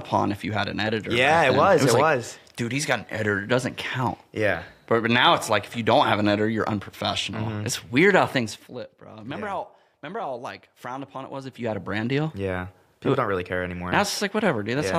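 Nothing here calls for a fix; there's no technical problem to point to anywhere in this audio.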